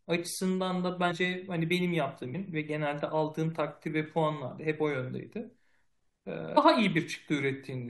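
Compressed frames skipped: whole runs of 23.2 ms frames never reach playback, so the speech jumps ahead at 1.10 s, 2.33 s and 6.56 s, losing roughly 100, 200 and 150 ms. Each join is heard as a sudden jump where part of the speech is simply missing.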